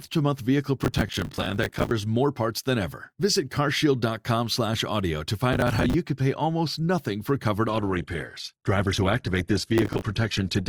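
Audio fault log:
0.84–1.91 s, 5.53–5.94 s, 9.78–10.02 s, processor overload crackle: a gritty, tearing crackle rides on the speech, longest in the first burst. The processor kept missing its buffer deadlines, and each miss replayed a scrap of old audio with hard edges. The grain fits buffers of around 10 ms.
7.68 s to the end, adaptive stream at a lower bitrate: the speech abruptly loses its top end, with nothing above 12.2 kHz, and turns thinner, with no gap at the switch. The sound points to the stream dropping from roughly 64 to 12 kbit/s Opus.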